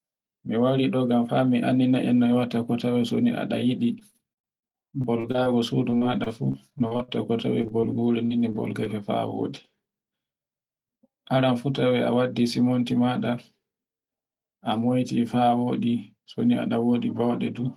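From 3.99 to 8.88 s, repeated packet loss breaks up the speech. Thirty gaps, the longest 51 ms, are patched by stretching earlier sound. It sounds choppy and robotic.

From 10.13 to 11.52 s, a jitter buffer speed-up trims about a tenth of a second. The speech runs about 6% faster at unchanged pitch and sounds hurried.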